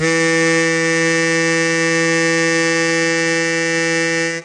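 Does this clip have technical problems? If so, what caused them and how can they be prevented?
Yes. Throughout the music the top end stops dead at about 9.6 kHz, and sustained tones carry a warbling, fizzy smear, which points to AAC compression, likely AAC-LC at a low bitrate fitting about 32 kbps. A plain low-pass filter would dull the sound without that swirling texture, and the damage here is plainly audible. To prevent it, encode at a higher bitrate or keep a lossless copy for playback.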